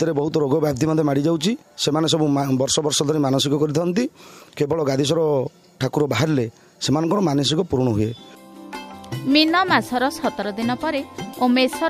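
No technical faults can be heard anywhere in this clip.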